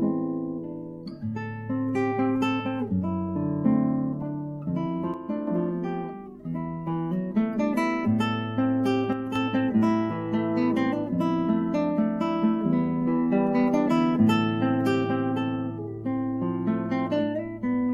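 At 5.14 to 5.47 s and again at 9.13 to 9.36 s, the sound abruptly sags by about 6 dB, then snaps back. That's likely one channel drops out, so the mono sum briefly carries only half its usual signal.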